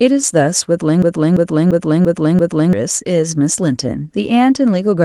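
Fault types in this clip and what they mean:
System hang loop: A frozen system left the hardware replaying one 341 ms chunk. It repeats five times, a 2.93 Hz stutter, from 1.02 to 2.73 s.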